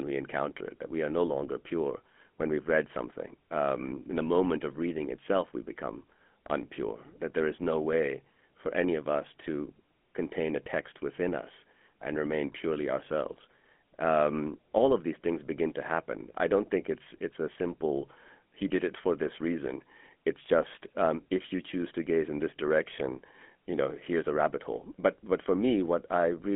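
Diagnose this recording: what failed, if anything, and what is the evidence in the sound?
The speech went through a GSM full-rate codec, which rebuilds the voice from a vocal-tract model and sparse pulse excitation, consistent with 13 kbps. Throughout, the band spans 200 Hz to 3.4 kHz, nothing passes above 3.7 kHz, and a plainly audible buzzy, gravelly roughness remains.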